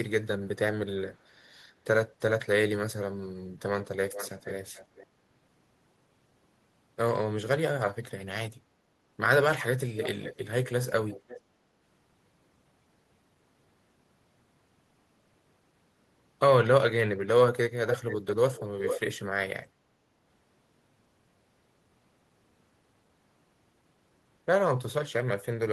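Echo leak at 4.12–5.07, 9.96–10.38, 11.09–11.41, 17.9–18.34, 18.54–18.66 and 18.84–19.01 s: a delayed copy of the speech returns 437 to 531 ms late, faint at first and nearly as loud as the speech near 18 s. The likely cause is a far-end echo canceller passing loudspeaker pickup back down the line.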